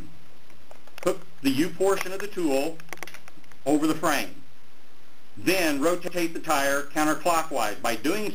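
At 2.98 s and again at 6.08 s, there is a stutter from overlapping chunks. The audio was handled in 3-second blocks. Each new block starts 100 ms before the previous one ends. That 100 ms piece plays twice at each join, giving a brief repeated skip.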